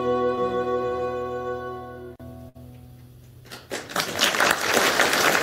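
Short concealed packet loss at 0.35 to 0.39 s: about 20 ms of audio never reached the decoder in time, and the receiver covered the hole with roughly 16 ms of synthesized continuation before blending back into the real signal. The fill extends whatever was sounding just before, either by repeating its pitch or by shaping noise to match it. The result is a brief smear or wobble, and any very short sound falling in that window may simply be gone.

Burst of packet loss at 2.49 to 2.57 s: a run of packets arrived too late or not at all, leaving about 60 ms of audio missing. The receiver bridged the gap with about 58 ms of concealment, carrying the preceding sound forward while turning it down, which yields either a held buzz or a fading hiss. Playback then picks up a little further along, with the intervening stretch absent.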